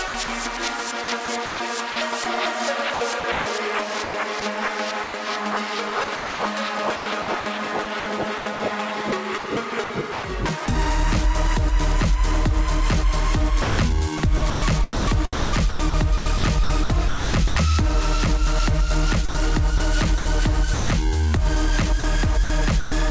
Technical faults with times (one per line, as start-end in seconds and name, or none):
0.08-5.14 sound chopped by the voice detector
6.04-10.68 sound chopped by the voice detector
13.62-17.56 sound chopped by the voice detector
19.29-20.90 sound chopped by the voice detector
22.00-22.92 sound chopped by the voice detector